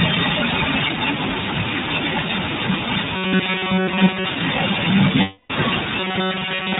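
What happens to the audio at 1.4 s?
At 1.4 s, as throughout, the iLBC codec cuts everything above 4 kHz and recodes each 20 ms frame independently, leaving plainly audible synthetic roughness rather than mere dullness.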